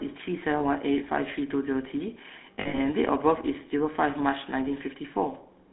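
Throughout, the speech carries the buzzy, gravelly texture of the GSM full-rate codec, band-limited to 250 Hz–3.6 kHz, consistent with 13 kbit/s vocal-tract modelling over pulse excitation.

Lost GSM frames appear at 0.58–0.61 s as a brief metallic smear, then at 2.54–2.8 s as 180 ms of scattered rough ringing from repeated last-good-frame parameters, with the longest run around 70 ms.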